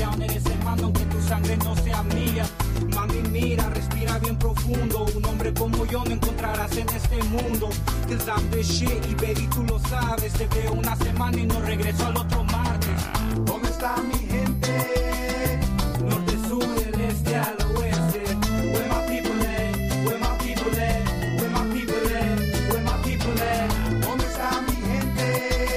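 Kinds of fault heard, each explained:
No technical fault can be heard in this audio. Nothing in the sound points to a problem with how it was captured, processed or passed along.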